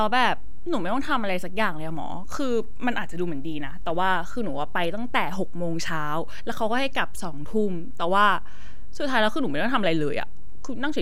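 From start to finish the speech sits on a DC offset of about -22 dBFS: the entire waveform is displaced from zero by a fixed amount. The offset itself is inaudible, but it shows as a constant component at 0 Hz in the spectrum and eats into headroom, so peaks on one polarity reach full scale sooner than they should. Any abrupt start or stop of playback would produce a click as the level jumps.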